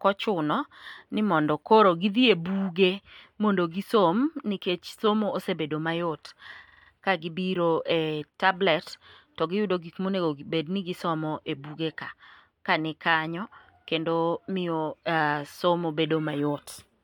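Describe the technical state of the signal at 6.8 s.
Repeated frames occupy 6.8 s, within a stutter running from 6.67 to 6.90 s. A short run of compressed speech data was delivered more than once, so the decoder replays the same 46 ms block five extra times instead of moving on. It sounds like a rapid mechanical stammer. The speech is stretched by 0.23 s.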